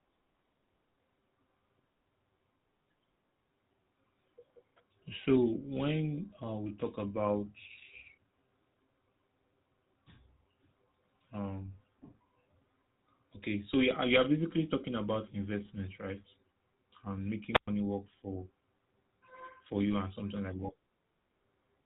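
From the start the speech carries the buzzy, gravelly roughness of the GSM full-rate codec, consistent with a 13 kbps coder. It rebuilds the voice from a vocal-tract model driven by sparse regular pulses and discards everything above 4 kHz, leaving plainly audible dullness and grit.

From 17.52 to 17.68 s, just before "work for", a wireless microphone squelch dropout occurs. The FM link faded, hiss rose briefly, and the receiver's squelch muted the output for about 113 ms before the signal returned.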